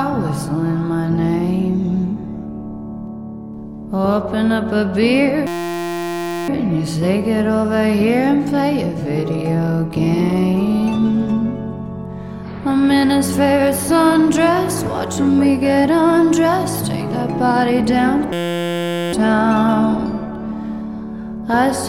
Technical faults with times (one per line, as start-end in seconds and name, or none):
5.47-6.48 system hang loop
18.33-19.13 system hang loop